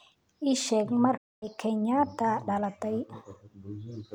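At 1.17 s the speech cuts to silence until 1.46 s, then resumes further along, as though it had kept playing underneath. The abrupt gap points to a Bluetooth dropout, likely caused by audio packets reaching the headphones too late and being discarded.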